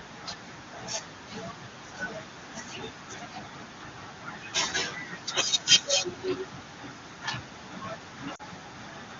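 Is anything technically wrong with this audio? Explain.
Yes. From 8.35 to 8.42 s there are lost AMR speech frames: about 40 ms of data, consistent with two frames, failed their checks. The wideband decoder filled the gap by repeating the previous pitch and spectral settings at falling gain, so the sound briefly smears and dips before recovering weak or rough for a moment.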